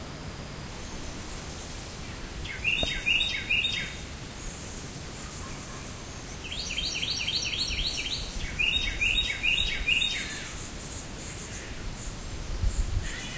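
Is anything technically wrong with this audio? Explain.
No, nothing technically wrong can be heard here.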